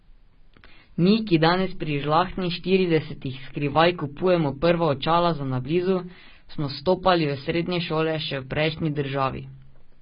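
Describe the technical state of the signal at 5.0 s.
At 5.0 s the speech shows heavy AAC compression damage, present for the whole clip. Nothing reaches above 5.2 kHz, and the sound is dull, smeared and warbly. That fits AAC-LC at around 16 kbps, likely coarsely quantising its frequency lines and lowering the cut-off.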